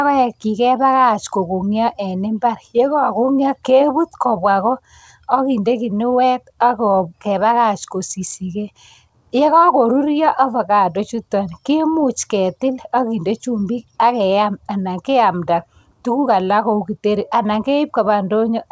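At 11.16 to 11.21 s, right before "kemuch ketil", there's a short stall from a late packet. The jitter buffer ran dry, so the receiver held the last bit of sound for about 17 ms until the packet showed up. Nothing's lost, just a brief drawn-out moment with a slight buzz or dip.

From 14.23 to 14.53 s, leading into "anan keamta tukuk alak", the jitter buffer speed-up kicks in. It had built up too much audio, so it trimmed out short pitch-period chunks, roughly 40 ms in all. The speech runs about 111% speed at the same pitch and sounds a little rushed. Throughout, the call codec cuts everything above 8 kHz, which fits G.722 at 64 kbps.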